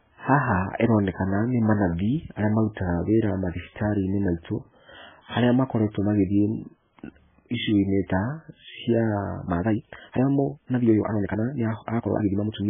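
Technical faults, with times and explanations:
Throughout: MP3 compression. The sound is likely the result of an MP3 encoder starved of bits, consistent with a bitrate around 9 kbps. To make that budget, the encoder cuts the treble above a fixed frequency and zeroes many weaker frequency lines, which flicker on and off between frames. The result is muffled, dull speech with a watery, swirling texture, metallic chirps on s sounds, and smeared consonant attacks. The damage is heavy across the whole clip.
9.43 to 12.70 s: time-stretched section. Right after "ta cia", the final stretch of audio has likely been squeezed to fit a shorter length, with short pieces dropped so that the pitch holds steady. The pace jumps abruptly to about 1.66 times normal speed while the pitch stays the same. Because chunks are skipped rather than smoothly compressed, the speech sounds rushed through to the end of the clip.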